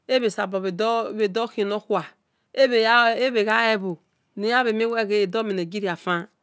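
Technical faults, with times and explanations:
Throughout, resampler restarted on every block: each 100 ms block was converted alone, which fits 44.1 kHz down to 16 kHz, so every boundary carries a small error, heard as ticks at 10 Hz during speech. A spectrogram shows faint vertical lines every 0.1 s; the waveform shows small steps.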